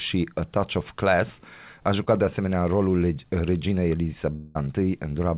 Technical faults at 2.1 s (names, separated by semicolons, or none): short concealed packet loss